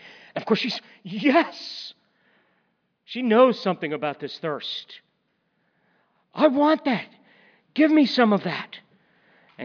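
No technical faults can be heard anywhere in the recording. From beginning to end, nothing in the speech stands out as a problem with how the audio was captured, processed or delivered.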